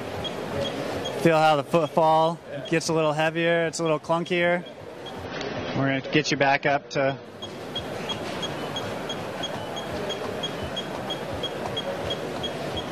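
From 5.25 to 7.25 s the adaptive stream drops to a lower bitrate, fitting 24 kbit/s AAC: treble above 7 kHz vanishes abruptly, without a gap, and artefacts rise.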